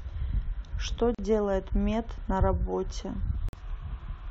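At 1.15 to 1.19 s and 3.49 to 3.53 s, the speech drops out for about 40 and 46 ms. Each is a gap at a join of encoded pieces. Encoder delay and end padding were left in, leaving brief silences with smeared edges before the speech resumes.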